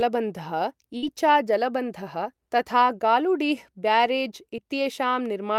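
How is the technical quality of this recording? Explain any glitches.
The recording has two packet-loss glitches, one longer and one much smaller.

From 0.97 to 1.04 s, just before "जलबन्धः तथा", the sound briefly freezes into a stretched, fading tail, then jumps ahead with a small piece missing. This is a burst of packet loss. Several consecutive packets failed to arrive in time, so the receiver extended the last audio it had for about 50 ms, turning it down as it went. When real packets resumed, about 60 ms of the original speech had been skipped.

At 4.56 to 4.60 s there is a much shorter smear, a quick wobble lasting only a few hundredths of a second. This is short concealed packet loss. A brief stretch of the stream missed the decoder's deadline, and the receiver bridged it with about 13 ms of synthesised continuation before blending back into the real signal. Roughly 20 ms of the original never got through.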